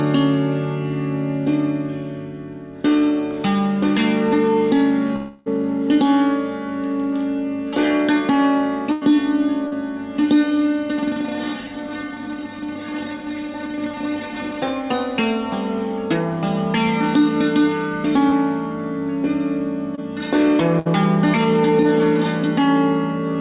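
Audio carried over a call link that shows nothing above 4 kHz, which points to a G.711 mu-law codec at 64 kbps, with several network faults. From 5.16 to 5.48 s a roughly 0.3 s stretch is replaced by a continuation of the preceding sound that fades rather than dropping to silence, most likely a long network dropout. The waveform shows a smooth decaying envelope, and the spectrogram shows smeared, flattened harmonics. A burst of packet loss at 8.92–9.03 s (about 100 ms missing) and again at 20.79–20.87 s (about 60 ms) is bridged by a held buzz or fading hiss. Each appears as a short, stationary, dimming band before the audio jumps ahead. Short concealed packet losses at 9.67–9.73, 18.29–18.33 and 19.95–19.99 s, each 20 to 40 ms, are filled from the last pitch or with shaped noise. They are heard as brief smears or wobbles and show as thin vertical seams.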